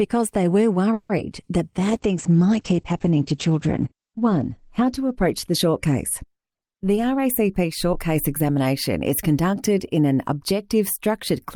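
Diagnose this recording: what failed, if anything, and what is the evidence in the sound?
From 0.93 to 1.11 s the last sound is stretched into a fading buzz for about 160 ms, then the audio resumes where it stopped with nothing lost. This is likely a call audio freeze: the network stalled packets and the jitter buffer ran dry. A spectrogram shows smeared, decaying horizontal streaks; the waveform shows a shrinking tail.

At 1.17 to 1.20 s there is a brief smear lasting a few hundredths of a second. This is short concealed packet loss at the network and decoder stage: about 20 ms never arrived and was papered over by extending the preceding sound. A spectrogram shows a blurred sliver and the waveform a slight discontinuity.

From 1.80 to 7.69 s the sound turns muffled and watery. This is a call bitrate drop at the codec stage, falling from 48 to 11 kbps and sitting at the lowest rate for about 2.4 s. 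Bandwidth shrinks from 20 kHz to 8 kHz, so a spectrogram shows a hard ceiling at 8 kHz.

From 6.43 to 8.65 s the audio runs hurried at unchanged pitch, about 7% fast. This is a jitter buffer speed-up, where the receiver trims pitch-period slices, about 150 ms in total, to shed accumulated delay. The waveform shows tiny splices, and a spectrogram shows events packed closer together without any frequency shift.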